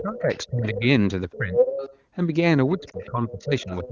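A speech clip in which a second voice bleeds in underneath from 0.0 to 0.81 s, at roughly 10 dB below the talker; level with it from 1.31 to 1.98 s; and about 15 dB down from 2.7 to 3.88 s. This is likely the other side's voice leaking through past the echo canceller. Over nearly the same spans, 0.0 to 0.83 s, 1.34 to 1.75 s and 2.74 s to the end, the talker's own voice sinks by as much as about 20 to 25 dB. That is likely speech suppressed in double talk, with both voices turned down together. A brief dip or warble at 2.91 to 2.97 s fits a single lost AMR speech frame, patched over by the decoder's concealment.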